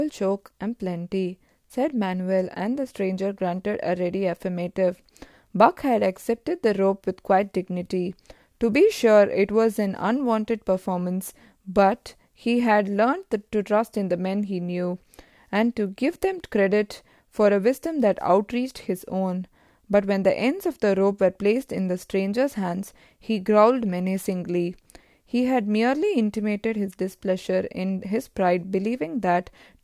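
Speech recording with no audible technical faults anywhere in the clip.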